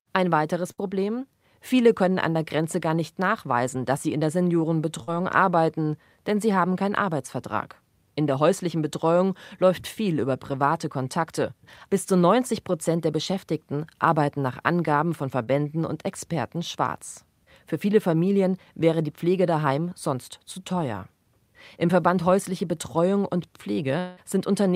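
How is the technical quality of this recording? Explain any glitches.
The recording has four network glitches, all points where audio failed to arrive and the receiver had to cover the gap.

At 0.71 to 0.80 s there is a burst of packet loss. Several consecutive packets, about 60 ms of speech, never reached the decoder in time. The receiver extended the last sound it had for roughly 62 ms, letting it fade, so you hear a brief held buzz or hiss. The speech then picks up slightly further along, with that fragment missing.

At 5.04 to 5.09 s and again at 15.43 to 15.49 s there is short concealed packet loss, each time about 40 ms. The decoder filled each hole for about 36 to 38 ms by continuing the preceding sound, either following its pitch or as shaped noise, then blended back into the real audio. The result is a quick smear or wobble, and a short consonant in that spot can disappear.

From 23.99 to 24.19 s, near the end, is what sounds like a long network dropout. 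About 180 ms of speech is lost, and the receiver stretches the previous sound across almost all of it, about 178 ms, as a fading buzz or hiss that never drops to silence. The speech then resumes without the missing part. The likely cause is a stall in the network path, where no packets arrived for that stretch.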